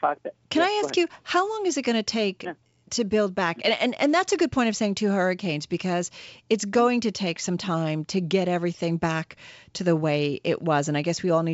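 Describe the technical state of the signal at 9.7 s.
At 9.7 s the speech is intact, passing through its G.722 wideband telephone coding at 64 kbit/s with no fault and nothing above about 7.7 kHz.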